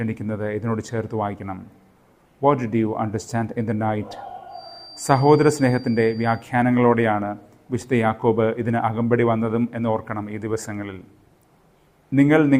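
From 4.46 to 6.48 s a thin, steady feedback whistle near 4.7 kHz sits well beneath the sound, likely a loudspeaker-microphone loop held just short of runaway feedback.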